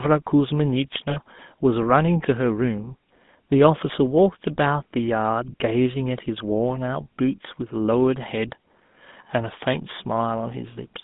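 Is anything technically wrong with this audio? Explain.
Yes. Two problems are audible.

Throughout, the speech has passed through a GSM full-rate codec, with the sound fitting its 13 kbps rate. This coder represents the vocal tract as a filter and feeds it a regularly spaced pulse train that keeps only every third excitation sample. The line carries only about 150 Hz to 3.6 kHz. The result is a plainly audible buzzy, gravelly roughness over the voice, with the brightness and air above the band missing.

At two points, lost GSM frames were concealed. The decoder replaced each missing frame by reusing the parameters of the last good one. From 1.10 to 1.18 s the gap is about 60 ms, which fits three consecutive frames. From 5.52 to 5.54 s it is about 20 ms, consistent with a single frame. Each gap is heard as a brief rough, metallic ringing where the sound is held rather than continuing naturally. 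The first is longer.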